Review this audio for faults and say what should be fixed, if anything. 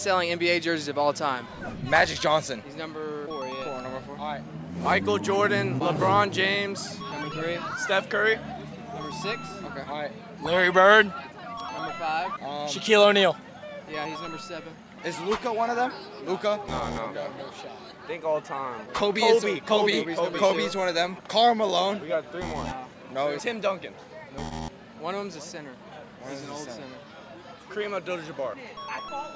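Nothing here needs fixing; no faults were heard.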